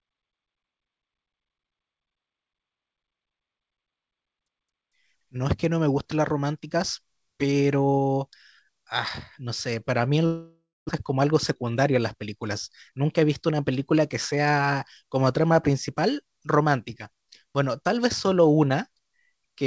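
A speech recording carried over a wideband call codec whose content stops at 8 kHz, it has a long network dropout from 10.26 to 10.91 s. The last sound is stretched into a fading buzzy fill, then about 220 ms of silence, and the speech resumes with roughly 400 ms of it gone. The likely cause is a run of lost or badly delayed packets that the receiver had to cover by concealment. On a spectrogram the harmonics smear into blurred, decaying bands and then a blank gap. The waveform shows a tapering envelope followed by a flat line. Afterwards the receiver's delay has grown by something like a fifth of a second, and it claws this back with jitter buffer speed-up from 11.13 to 12.48 s at about 110% speed, trimming around 150 ms, and again from 12.92 to 13.52 s at about 109%, trimming around 70 ms. In both stretches it cuts out small pitch-period pieces over and over, so the speech sounds hurried but keeps its pitch. 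A spectrogram shows compressed syllable timing with unchanged harmonic spacing, and the waveform shows whole cycles dropped with occasional small seams.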